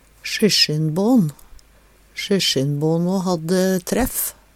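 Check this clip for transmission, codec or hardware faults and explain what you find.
Checking the clip turns up no faults to explain.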